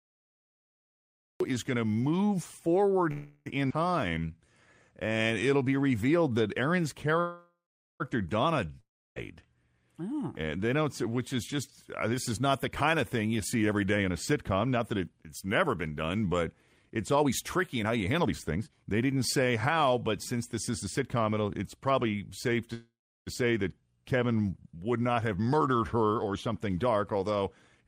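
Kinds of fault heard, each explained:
Cut-off start: The recording begins mid-sound, out of digital silence with no natural onset; the audio is cut in at 1.40 s, just before "is going to move".
Call audio freeze: Three pauses where the last sound is stretched into a fading buzz, likely from delayed packets, then resumes intact, adding 344 ms, 801 ms and 531 ms.
Jitter buffer slow-down: From 4.01 to 4.58 s repeated pitch periods stretch the speech to 81% speed at unchanged pitch, adding 116 ms to rebuild buffer reserve.
Long network dropout: At 8.80 s the sound decays through a fading buzz into silence, likely lost packets, and about 360 ms of speech is never heard before it resumes.
Jitter buffer speed-up: Trimmed pitch periods hurry the speech at unchanged pitch, 114% from "this is not the" to "it's probably safe", then 109% after "would not have".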